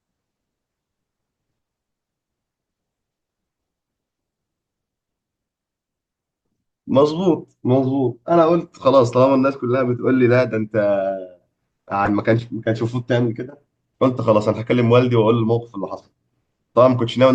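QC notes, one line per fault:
12.05–12.09 s, corrupt frame decoded: a brief glitch cuts through the speech for about 40 ms. Flipped bits in a couple of compressed frames were decoded anyway. Misread gains and codes threw energy to wrong frequencies.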